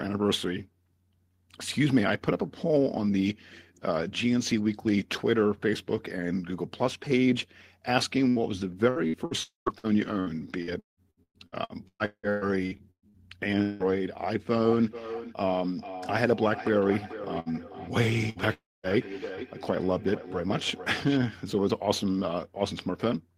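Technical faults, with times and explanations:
8.29–13.83 s, repeated packet loss (robotic sound): the network kept dropping or delaying packets over this stretch, 22 gaps in all, the longest about 180 ms. Each time the receiver patched the hole by extending the last bit of sound before the next hole arrived. Roughly a third of the span, about 1.7 s, is filled-in sound rather than real audio, so the speech turns choppy and robotic, with pieces missing.
9.43–9.69 s and 18.53–18.86 s, long network dropout: at 9.43 s the sound smears into a held, fading buzz or hiss, then falls to about 140 ms of silence before speech resumes at 9.69 s with a portion skipped. At 18.53 s the same happens, with about 220 ms of silence before 18.86 s. The pattern likely comes from audio ceasing to arrive for a quarter to a third of a second, so the receiver stretched the last sound, gave up, and discarded what was lost.
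14.61–21.32 s, feedback echo between two devices: a second device in the room is likely playing this call while its microphone sends it back. Echo cancellation only removes a device's own playback, so this loop is never cancelled. Speech returns about 0.4 s later as a thinner, ringing copy, at its strongest about 12 dB below the direct speech.
17.40–17.49 s and 18.30–18.38 s, burst of packet loss: in each spot about 60 ms of audio, a short run of packets, was lost or arrived too late to play. The receiver continued the preceding sound and faded it out across the gap, so each spot is a brief held buzz or hiss. Speech then picks up slightly further on, with that sliver missing.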